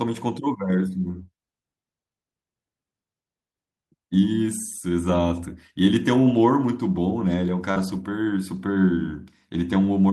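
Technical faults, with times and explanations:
5.07–5.21 s, 6.29–6.39 s and 7.76–8.02 s, lost packet rebuilt from error correction: packets went missing, and the decoder played the low-bitrate copies carried in the packets that followed. There is no gap, but about 80 ms, 60 ms and 140 ms of speech come out rougher and noisier. These lengths fit runs of 20 ms packets. The last and longest stretch follows straight on from the concealed loss below.
7.71–7.78 s, short concealed packet loss: about 40 ms of the call arrived too late to use. The receiver filled the hole by carrying the last sound forward for about 42 ms and then blended back into the real audio. This produces a brief smear or wobble, and any short consonant in that instant can drop out. The rebuilt stretch that follows makes the whole disturbance run until about 8.02 s.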